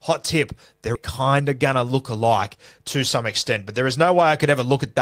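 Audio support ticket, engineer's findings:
Skip ahead, 0.95–0.97 s. Abrupt forward jump in the speech, with roughly a second of audio gone and no concealment fill. The two sides are butted together with no gap. Probable component: jitter buffer overflow discarding queued audio, or loss in transit. Playout delay drops by about a second at the jump.

Jitter buffer speed-up, 1.27–2.25 s. Speech runs about 9% fast at unchanged pitch and sounds hurried. Receiver trimmed roughly a tenth of a second by repeatedly cutting pitch-period-sized pieces to drain excess buffered delay. Second instance, 2.78–4.96 s. Same mechanism, about 6% fast, with some 150 ms removed. Buffer still above its target level.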